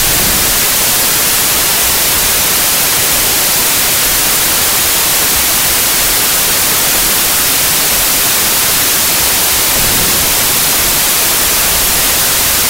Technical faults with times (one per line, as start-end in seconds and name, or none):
0.00-12.69 wrong sample width